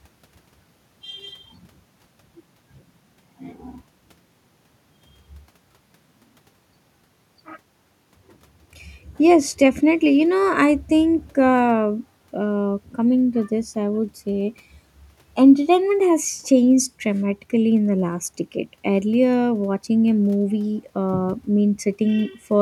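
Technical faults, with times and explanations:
No technical faults can be heard anywhere in this speech recording.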